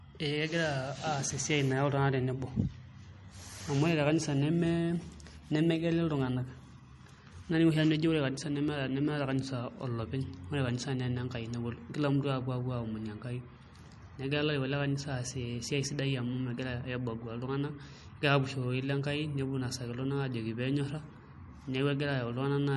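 From start to finish the speech sounds dull and plainly watery, with nothing above about 11.6 kHz and a swirling, metallic edge on the s sounds. This is likely MP3 compression at a bitrate starved of bits, which fits a stream of roughly 39 kbps. Short of data, the encoder cut the treble off at that fixed frequency and dropped the weaker frequency lines, which flicker on and off between frames.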